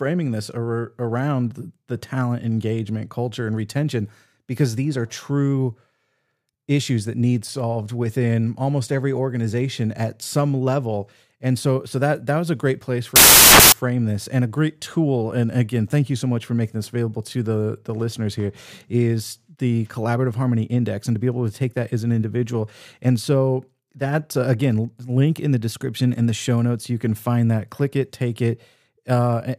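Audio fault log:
13.16 to 13.72 s, samples built from the wrong bytes: for just over half a second the speech turns into loud, harsh broadband noise. Each sample's bytes were assembled wrongly, so the rapidly changing low bits became the large part of every value.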